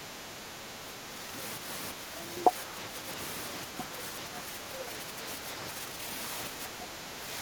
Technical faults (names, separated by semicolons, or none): speech suppressed in double talk